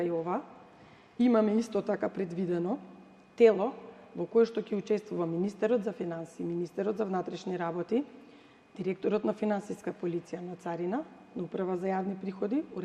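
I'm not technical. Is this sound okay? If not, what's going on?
Yes, nothing stood out as a problem when I listened to it.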